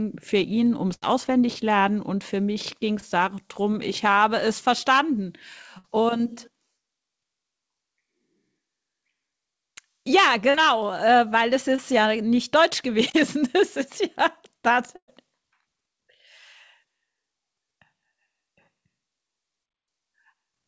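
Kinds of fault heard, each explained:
Burst of packet loss: Three longer runs of call audio failed to arrive in time, near 0.94 s, 5.78 s and 14.96 s. The receiver stretched the last sound over each hole, about 80 ms, 60 ms and 120 ms long, fading it as it went. The last one decays into about 60 ms of silence. Afterwards the speech picks up further along, and the stretch in between is simply gone.
Short concealed packet loss: Three brief holes appear, at 3.00 s, 10.50 s and 11.76 s. They are about 20 ms, 40 ms and 20 ms long. The receiver patched each one by extending the preceding sound, then blended back into the real audio. Each shows as a quick smear or wobble in the speech. The call path cuts off everything above 8 kHz throughout.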